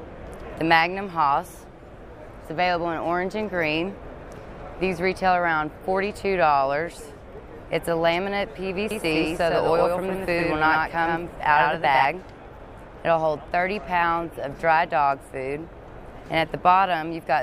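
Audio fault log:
8.91–12.05 s, doubled audio track: a dry, full-band copy trails about 100 ms behind at roughly 5 dB lower, switching on and off abruptly, unlike a decaying echo, likely from a second capture path.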